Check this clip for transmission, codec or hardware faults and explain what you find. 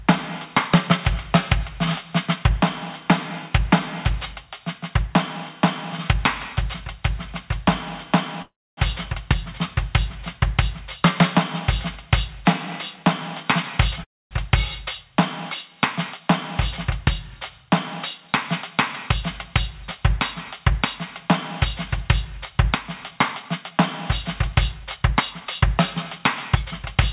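Three faults affect this music clip, which is also band-limited to nothing above 4 kHz, as expected from a G.711 A-law call path.

Gain pumping runs throughout. Input gain set far too high is likely being pulled down by a fast limiter on every loud passage, so the background swells in the quieter gaps and ducks by around 20 dB under each peak. Because the level change tracks the music's own loudness, it is distinct from a steady fade or level drift, and the whole mix sounds squashed.

Call audio freezes occur at 8.42 to 8.80 s and 14.04 to 14.34 s. Delayed packets emptied the jitter buffer, likely causing the receiver to extend the last sound as a fading buzz and then silence (about 270 ms and 260 ms of silence). The music then resumes exactly where it stopped, with nothing cut out, which separates this from a packet-loss dropout.

Jitter buffer speed-up occurs at 12.96 to 13.46 s (110%), 16.99 to 18.29 s (102%), 22.52 to 23.79 s (104%) and 24.47 to 27.04 s (103%). 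To shed excess buffered delay, short pitch-period pieces were trimmed repeatedly, removing around 40 to 70 ms in each event. The tempo rushes in the 110% event while pitch stays put, unlike a resampling error, which would shift pitch too.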